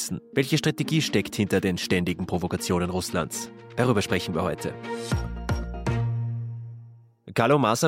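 Nothing stood out as a technical problem on listening.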